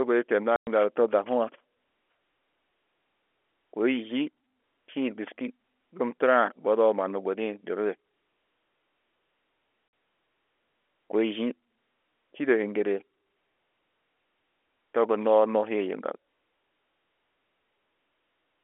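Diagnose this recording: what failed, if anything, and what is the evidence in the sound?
Packet loss filled with silence, a network-stage fault, chops the speech twice: 110 ms from 0.56 to 0.67 s and 50 ms from 9.88 to 9.93 s. Both lengths are multiples of 10 ms, which fits 10 ms packets. The receiver put nothing in their place, so the sound stops dead with hard edges. A waveform shows flat silent runs with abrupt steps. A spectrogram shows blank vertical bands with thin broadband streaks at their borders.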